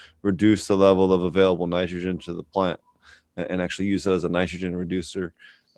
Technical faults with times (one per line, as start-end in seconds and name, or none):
none